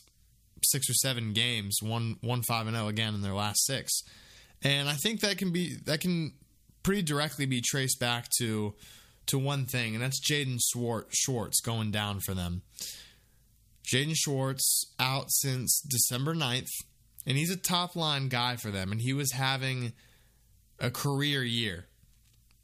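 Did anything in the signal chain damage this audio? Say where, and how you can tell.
No, nothing along the way seems to have hurt this speech recording; it comes through without any damage that can be heard.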